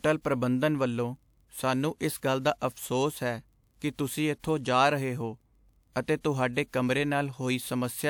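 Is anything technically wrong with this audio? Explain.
Yes. The transform codec spread its quantisation noise evenly across each block, so noise sized for a sharp attack leaked into the quiet just before it. This pre-echo occurs at 4.39, 5.92, 6.03 and 6.20 s, reaching back 38 to 54 ms as a brief hiss ahead of each smeared, softened onset.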